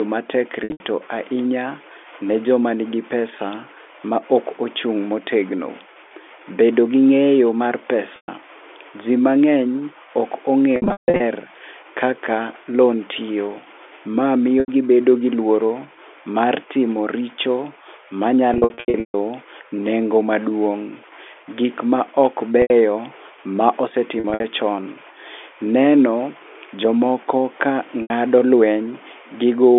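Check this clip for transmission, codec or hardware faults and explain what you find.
Packet loss with pitch repetition occurs eight times, at 0.64 s (just before "ahinya ne joma nigi"), 8.16, 10.76, 14.6 (before "gibedo gi luoro"), 18.54, 22.62, 24.2 and 28.02 s (after "jomoko ka"). The receiver bridges each gap by repeating the last pitch period. The 80 to 140 ms losses sound like a briefly held, buzzy tone. At 10.76 and 18.54 s, scattered losses of 340 and 420 ms fade into silence. Unlike a plain dropout, the gaps hold a repeated tone rather than cutting abruptly to silence. The narrow telephone band comes from the G.711 coding.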